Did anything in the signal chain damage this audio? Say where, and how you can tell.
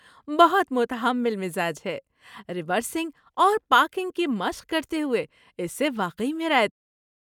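No, nothing in the chain has damaged this speech, and the only level change is a deliberate smooth fade-out that begins around 6.5 s and reaches silence by 6.72 s with no click or hard edge.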